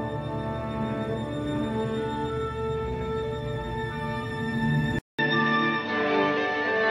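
The audio has an abrupt change at 4.99 s: a 200 ms silence, then everything to the end loses all content above 6.3 kHz and gains a faint new noise floor, with the overall level about the same, most likely an input switched to a poorer device.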